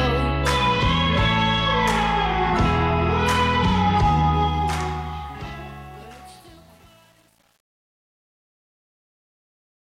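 A scratch or blemish on the disc destroyed more data than the player's error correction could rebuild, so it concealed the damaged samples. The result is CD scratch ticks: four short ticks between 3.13 and 3.54 s, the longest lasting about a millisecond, spaced at the regular interval of successive disc revolutions. A digital fade stage with too little resolution and no dither then caused truncation distortion on a fade. The fade-out runs to the end at 9.88 s, and from 4.34 s the signal loses fine detail, which fits an 8-bit stage. As the level falls, the waveform collapses into a few coarse steps, and from 5.24 s to 9.88 s the quiet tail turns gritty.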